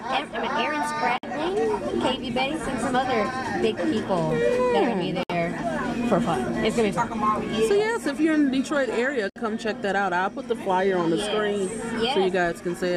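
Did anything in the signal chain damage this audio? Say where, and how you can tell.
Yes. There are gaps at joins of encoded pieces at 1.18 to 1.23 s, 5.23 to 5.30 s and 9.30 to 9.36 s, about 53, 64 and 64 ms long. These codec-stage faults recur every 4 s. Continuous sound drops to silence, with smeared edges, then resumes exactly where it left off. The audio was encoded in separate pieces and joined untrimmed, so each join keeps the encoder's start-up delay and last-frame padding.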